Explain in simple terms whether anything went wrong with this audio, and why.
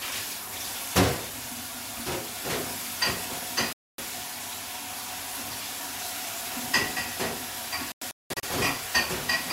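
Two gaps are heard, and both are digital broadcast dropouts. At 3.73 s the sound cuts to silence for about a quarter of a second, returning at 3.99 s. From 7.92 to 8.44 s it breaks up into several short holes, the longest about 0.19 s. The receiver stopped getting clean data, so it muted until good data returned. Whatever was sent during those gaps is gone.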